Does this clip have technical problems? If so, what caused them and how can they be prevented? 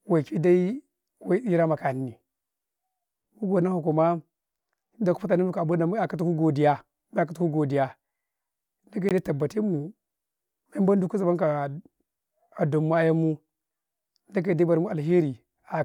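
Yes. At 9.09 s the speech drops into a brief 19 ms silence with smeared edges: a gap at a join of encoded pieces, where encoder delay and end padding were left in. Trimming that delay and padding before joining, or encoding the speech in one run, prevents it.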